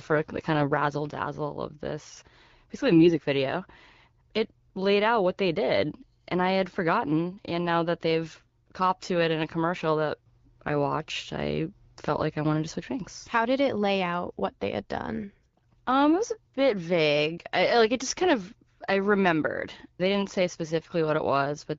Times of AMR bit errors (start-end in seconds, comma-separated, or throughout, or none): 2.92-3.16, 8.40-8.50